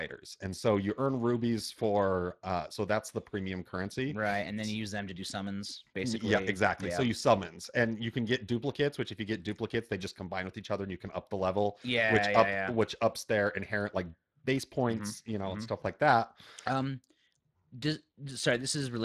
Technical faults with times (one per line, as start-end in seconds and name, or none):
0.00-19.04 Speex codec